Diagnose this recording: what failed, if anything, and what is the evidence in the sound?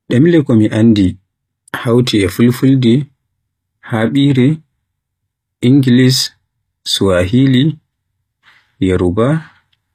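Codec stage: the speech has nothing above 14.9 kHz throughout, so it's likely low-bitrate audio saved at a high bitrate. Re-encoding can't restore that missing top end.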